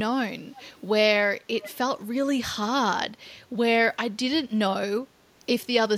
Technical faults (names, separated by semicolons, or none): echo leak